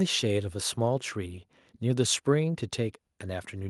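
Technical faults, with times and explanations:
No technical faults are detected anywhere in this speech recording.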